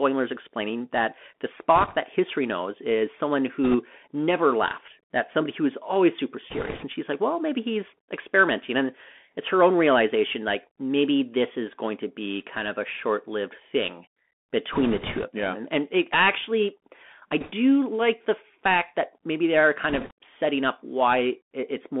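Speech heard through a Bluetooth CVSD headset codec throughout. It passes only about 200 Hz to 3.4 kHz, with scratchy sibilants, granular hiss and slope-overload distortion on loud highs. Bit errors on a Bluetooth voice link add short bursts of rushing crackle, not clicks, at roughly a few percent error rate. They fall at 1.76–1.97 s, 3.64–3.76 s and 6.50–6.85 s. Another comes at 14.73–15.24 s, just before "of them". One sits at 17.40–17.52 s, between "and it actually I" and "like the fact that". The last is at 19.89–20.12 s, between "that maybe they are" and "setting up".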